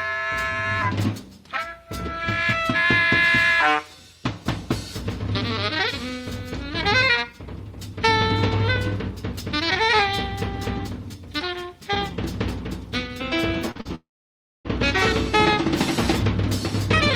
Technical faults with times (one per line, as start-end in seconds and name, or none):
13.71-13.87 short concealed packet loss
13.95-14.66 long network dropout